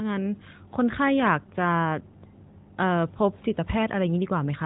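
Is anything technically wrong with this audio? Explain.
No, nothing here is technically wrong with the speech. It has the narrow band of the AMR narrowband mobile codec, with nothing above 4 kHz and only light coding colour, which fits the top 12.2 kbps mode.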